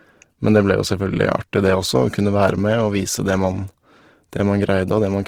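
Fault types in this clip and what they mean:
Opus compression: The speech sounds plainly rough and grainy throughout, though full bandwidth survives. It likely comes from Opus music mode at roughly 16 kbps.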